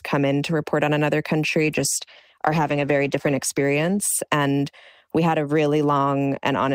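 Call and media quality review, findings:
Call bitrate drop, 1.63 to 4.09 s, just after "to report on another". Speech turns coarse, watery and muffled, then clears. Probable component: Opus encoder following a falling bandwidth estimate. Sound fits a cut from about 40 to 16 kbps, held near its lowest for roughly 2.4 s. Coarser coding plus narrowed high-frequency band until the rate recovers.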